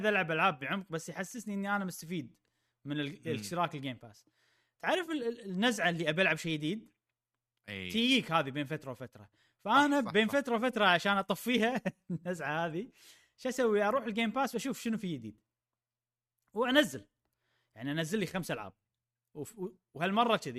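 AAC frame loss with concealment appears at 5.06 to 5.09 s in this speech clip. About 20 ms of coded audio never reached the decoder, which fits two missing frames of roughly 10 ms each, likely from a low-delay AAC stream. The decoder bridges the gap by reusing the last good spectrum with randomised signs and interpolated energy, so the dropout is heard as a brief smeared, noisy or phasey patch rather than silence.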